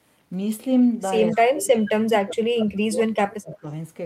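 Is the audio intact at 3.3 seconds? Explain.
No. From 1.9 to 3.64 s the speech dips and cuts out in pieces, falling by as much as about 35 dB over roughly a second and a half. This is speech suppressed in double talk, likely an echo canceller muting the near talker while both sides spoke.

Between 3.3 and 3.34 s a faint scrap of delayed speech, about 25 dB below the main speech, arrives 171 ms late. This is an echo leak, likely loudspeaker sound that the far side's echo canceller failed to remove.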